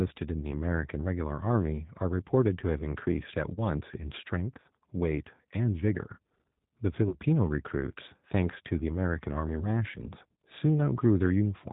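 Throughout the speech, the G.729 codec shapes the sound, most likely the G.729A variant at 8 kbit/s given how plainly rough and synthetic it is. Everything is rebuilt from a filter and sparse pulses. A spectrogram shows a hard ceiling at 4 kHz and smeared, grainy harmonics.

At 3.54 to 3.62 s and again at 7.09 to 7.18 s, VoIP packet loss concealed by the speech codec appears. About 30 ms of audio is missing each time, which fits a single lost packet. The decoder extrapolates from its last pitch and filter into a fading buzzy tone or coloured noise, and the sound stays weak briefly afterwards. The waveform dips in level.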